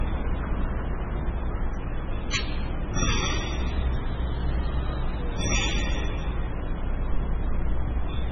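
From start to finish the audio has nothing above 8.3 kHz, and the remaining band has a watery, swirling texture with smeared attacks, likely from heavy MP3 compression. The encoder appears to have been starved of bits, which fits a bitrate near 16 kbps. It cut the treble at a fixed point and dropped weak frequency components, which flicker in and out between frames and produce the unstable, underwater character.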